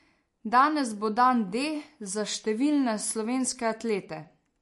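Speech with plainly audible MP3 compression throughout: treble stops dead near 11.3 kHz and weak detail swirls, likely from a starved encoder, which fits roughly 48 kbps.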